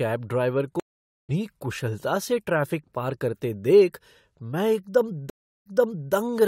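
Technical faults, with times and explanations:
0.80–1.30 s and 5.30–6.13 s, stream reconnect: the connection dropped twice, so the player fell silent, reconnected and started a fresh decoder mid-stream. The first gap lasts 0.49 s, and the speech resumes at "कुशलता से ट्रैफ़िक पार", roughly half a second further on, so material is skipped. The second gap lasts 0.36 s, and the speech picks up 0.47 s earlier than where it broke, repeating a stretch that was resent. Each restart fades in over its first frame.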